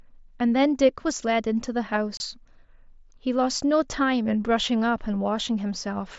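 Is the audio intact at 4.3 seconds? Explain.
Yes, the speech at 4.3 seconds is intact, with nothing interrupting or damaging it at that moment.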